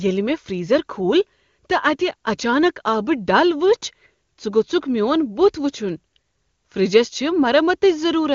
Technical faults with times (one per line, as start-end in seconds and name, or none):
none